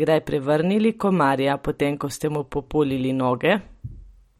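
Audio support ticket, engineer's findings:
Watery, swirling texture across the whole speech clip, s sounds chirpy and metallic, consonant attacks smeared; treble absent above 15.8 kHz. Likely MP3 compression, starved bits consistent with about 48 kbps: weak frequency lines dropping in and out between frames, fixed lowpass. Unlike plain filtering or band-limiting, the loss flickers over time rather than sitting steady.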